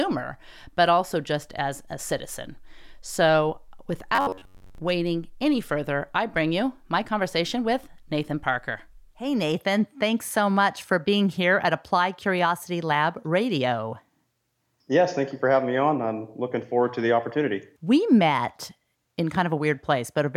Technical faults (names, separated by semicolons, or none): robotic sound from repeated short buffers